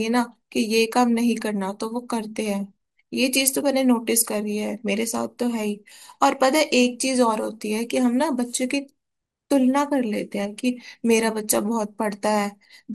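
Throughout, the speech likely passed through MP2 compression at a low bitrate, around 80 kbps, switching off upper sub-bands and coarsely quantising the rest: dull, flickering highs with gurgling, granular distortion.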